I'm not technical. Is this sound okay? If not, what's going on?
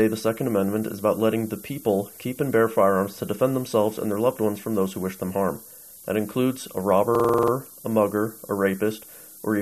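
No, there are two problems. The first runs the whole way through: low bit depth with noise shaping. The sound is stored with only about seven bits of detail, and the rounding errors get pushed up high. You hear a constant thin hiss that gets stronger toward the top end.

The second is a system hang loop from about 7.15 to 7.52 s. The computer briefly froze while the sound hardware kept replaying its last chunk. A 46 ms snippet repeats eight times, giving a rapid stutter at roughly 21 beats per second.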